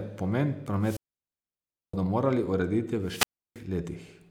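Wireless microphone squelch dropouts interrupt the speech at 0.80–1.96 s and 3.03–3.62 s. The radio signal fades, hiss rises, and the receiver's squelch mutes output for about 970 ms, then 330 ms.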